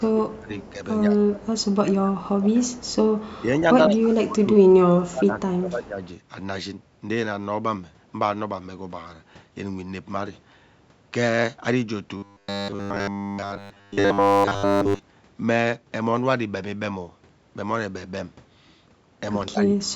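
From 0.0 to 6.02 s the speech repeatedly sinks, by about 20 dB at its deepest, for roughly four seconds in total, likely speech suppressed in double talk: with both ends talking, the echo canceller treated this voice as echo and turned it down along with the loudspeaker signal.

Within that stretch, a faint, delayed copy of the voice trails behind it at 0.31 to 0.72 s, 1.57 to 1.76 s, 2.93 to 3.40 s and 5.85 to 6.08 s, about 30 to 35 dB below the speech and 159 ms late. This is likely echo leak, where the far end's canceller let loudspeaker sound picked up by its microphone pass back.

From 12.17 to 15.02 s the voice turns into a rigid, metallic buzz at 100 Hz, only loosely following the speech. This is robotic sound from repeated short buffers, likely caused by audio arriving too seldom, so a 10 ms block was looped in place of the missing sound.

At 19.49 s the speech is pulled down again, by about 35 dB, through to the end at 19.96 s, once more consistent with speech suppressed in double talk.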